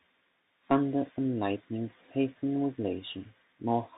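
Throughout, the speech sounds muffled and scratchy, with a granular hiss underneath and nothing above 4 kHz: Bluetooth CVSD headset codec damage, fitting a 64 kbps link.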